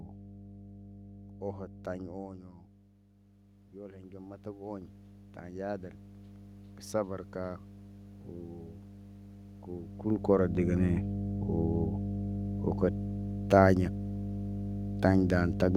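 Mains hum runs through the whole recording, a steady 50 Hz tone from power-line coupling, sitting only slightly below the speech level. From 2.4 to 6.31 s, automatic gain rising follows the talker moving away and the input dropping about 15 dB: the control lifts gain by about 14 dB, swelling voice and room noise together.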